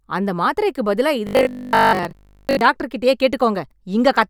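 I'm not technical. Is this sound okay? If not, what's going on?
No. From 1.27 to 2.61 s, there's robotic sound from repeated short buffers. Audio likely arrived late, so tiny pieces repeated, causing a 50 Hz buzz.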